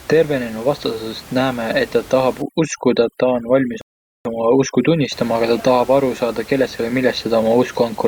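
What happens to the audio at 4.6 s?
At 4.6 s the clip is inside a stretch of overdone noise removal running from 2.42 to 5.12 s, just after "näeme et ta tahab". The reducer, set too aggressively, shuts off individual frequency bands whenever they drop near its noise estimate, catching quiet parts of the speech too. The room noise, about 22 dB under the speech, drops and breaks up into twinkling specks.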